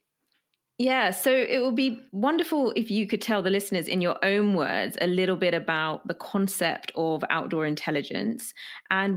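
No technical faults can be heard anywhere in the speech recording; the signal stays continuous and steady throughout, with no audible disruption to the audio path.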